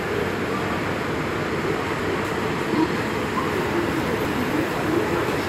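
At 1.75 to 2.25 s and again at 4.0 to 4.5 s, chunks out of order: a 250 ms block arrives one chunk late and plays after its successor. The audio briefly jumbles at three hard joins, but unlike a dropout, nothing is missing.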